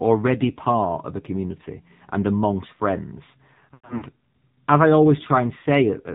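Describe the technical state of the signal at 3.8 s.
Lost AMR speech frames from 3.74 to 4.04 s, just after "community and amongst friends": the decoder repeats its last pitch and vocal-tract settings at falling gain, so speech smears and fades in dips. The longest gap lasts about 100 ms. Throughout, the AMR narrowband mobile codec cuts everything above 4 kHz and gives a buzzy, synthetic tone, which fits a low bitrate near 7.4 kbps.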